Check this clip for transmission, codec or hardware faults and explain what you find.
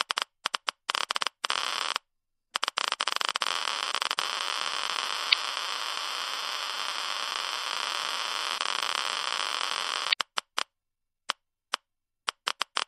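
Two codec faults are audible: compression damage throughout and two brief corruption events.

MP3 compression, across the whole clip: weak spectral detail flickers in and out between frames, giving a watery, swirling texture with metallic chirps on bright content and smeared attacks. The damage is plainly audible, which fits a low rate around 64 kbps. The likely cause is an encoder short of bits, dropping high frequencies and quiet components to stay within budget.

Damaged data in a compressed stream, at 5.29 to 5.34 s and again at 10.09 to 10.14 s: each is a short squawk or blip about 40 ms long. Part of the encoded stream was corrupted, so the decoder misread or rejected the affected frame, lost sync, and resumed at the next valid frame header.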